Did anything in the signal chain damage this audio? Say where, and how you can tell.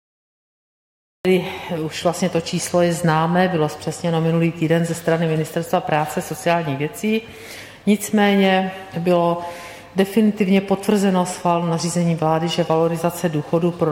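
Yes. Cut-off start at the capture stage: digital silence until 1.25 s, then sound appears mid-event with no attack. Recording began late.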